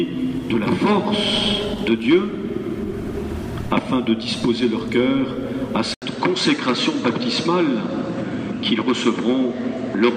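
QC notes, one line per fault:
5.94–10.17 s input switched to a poorer device: likely a mid-recording input change; after an 80 ms gap, sound stops above 8.5 kHz, duller, with faint new background noise.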